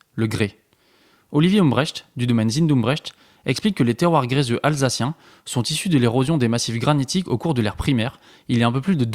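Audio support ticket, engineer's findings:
No faults found on the speech.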